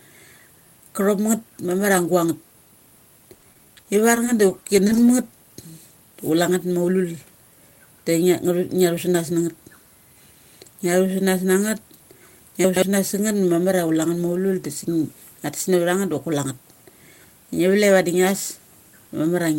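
From 3.33 to 5.09 s the speech turns choppy and robotic, with small pieces missing. This is repeated packet loss: 19 short gaps, the longest 30 ms, were patched by stretching the preceding sound, leaving about 180 ms absent.

At 7.87 to 8.05 s, and again at 12.64 to 12.82 s, a brief garbled jumble interrupts the speech. Each is chunks out of order: a 60 ms chunk plays two chunks late, so nothing is lost but there are three hard joins.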